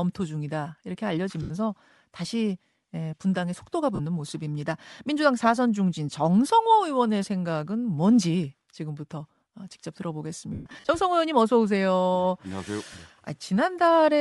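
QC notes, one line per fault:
throughout: Bluetooth LC3 compression. The speech has a plainly audible breathy, grainy edge across the upper range, where high-frequency detail sounds replaced by shaped noise rather than carried cleanly. This is likely LC3 coding from a Bluetooth LE Audio link. The transform coder drops spectral bands it cannot afford and fills them with noise. The degree of damage fits a mid-range setting of around 48 kbps with 10 ms frames.
1.42–1.51 s, 3.95–4.00 s, 10.53–10.89 s, 12.93 s: lost LE Audio frames. Each gap is covered by a noisy smear instead of clean speech, because the decoder repeats the last spectrum with random signs and fades it as a loss continues. The gaps last 80 ms, 40 ms and 10 ms. The 10.53–10.89 s stretch is patchier, with 250 ms missing in bursts, the longest run about 150 ms, where the smear audibly decays.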